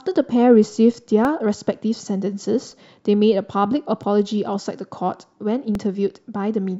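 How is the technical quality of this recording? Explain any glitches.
There are four tiny glitches, all repeated buffers, at 1.25, 2.71, 4.03 and 5.75 s. Each time, fresh audio didn't reach the output in time, so the device replayed its last chunk, about 1.33 ms long, which fits a 64-sample buffer. It played once extra at 1.25, 4.03 and 5.75 s, and twice at 2.71 s. Because the chunk is so short, you hear a hard little click or brief buzz rather than a stutter.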